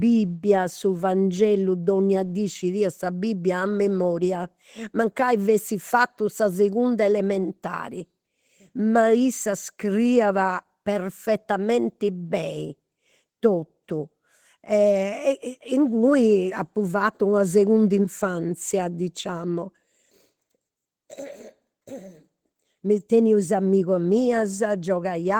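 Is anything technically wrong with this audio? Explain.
Yes. Throughout, Opus voice compression in hybrid mode coarsely codes the speech excitation, consistent with roughly 16 kbps, leaving it plainly hoarse and slightly robotic.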